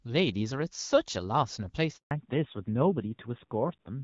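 At 1.97 s the speech cuts out in a handover gap. The call is being passed from one network link to another, and no speech frames get through during the switch. The sound fades within a few tens of milliseconds and stays silent for 140 ms, until 2.11 s. Anything said in that stretch is gone, not delayed.

From 2.11 s to the end, there is a fallback to narrowband. Before the gap, the wideband HD Voice path carries speech with light coding damage, which fits AMR-WB at 12.65 kbit/s. After the switch, nothing remains above 4 kHz. The speech loses its crisp top end and turns dull and muffled. It also sounds rougher and grainier, which points to a low-rate narrowband codec such as AMR-NB at 7.4 kbit/s.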